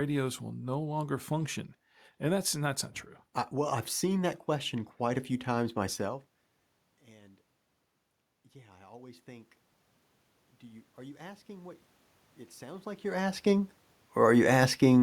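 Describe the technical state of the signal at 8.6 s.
Automatic gain rising, from 8.54 to 9.57 s: after the input fell by about 24 dB, the gain control judged the level too low and raised its gain gradually, by about 4 dB, so the speech and the room noise behind it swell together.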